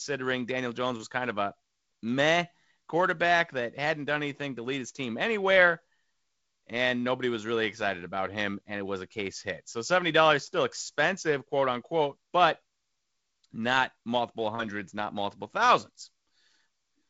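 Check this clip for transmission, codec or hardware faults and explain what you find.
No faults found in this clip.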